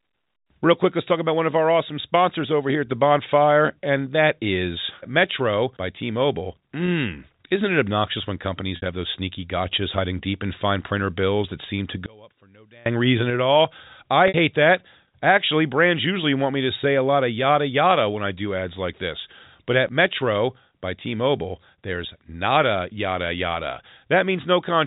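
Speech, carried over telephone-band G.711 A-law coding that stops at 4 kHz, with brief glitches from packet loss with pitch repetition. At 6.86 s a 20 ms gap comes out as a slightly held, buzzy stretch of voice. At 8.76 to 8.82 s and 14.28 to 14.34 s the gaps are 60 ms, long enough that the repeated pitch cycle fades toward silence before the speech returns through a short cross-fade. In each case the receiver is looping the last pitch period to cover missing packets. From 12.06 to 12.86 s the voice suddenly drops by about 29 dB and all but disappears, leaving a faint residue. That deep, brief cancellation points to one channel inverted, most likely a polarity-reversed stereo channel being summed to mono so the centred voice cancels itself.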